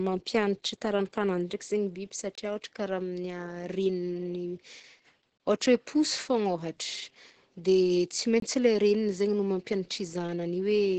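From start to finish the speech carries heavy Opus voice compression. The sound is muffled and hoarse, with a faint robotic edge where the coder rebuilds the excitation coarsely. Nothing is heard above 9 kHz, so the top of the band is cut away. The muffled, hoarse texture is typical of SILK linear-prediction coding at a very low rate, which points to an Opus stream at roughly 10 kbps in wideband mode.

A gap between chunks appears at 2.35–2.38 s, again at 5.38–5.40 s, and again at 8.40–8.42 s. Each is a hole of about 23 ms, and they come every 3.0 s. That regular spacing shows the audio was delivered in 3-second pieces with a short stretch of silence left at each join, probably from padding or a late start on each piece. No speech is lost, but each hole briefly interrupts the sound.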